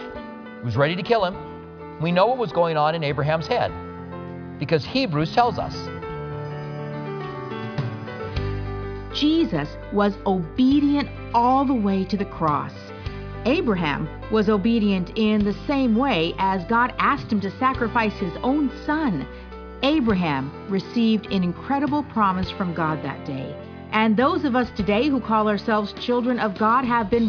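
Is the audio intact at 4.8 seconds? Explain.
Yes, the audio is intact at 4.8 seconds, with nothing at that point that breaks or disturbs the sound.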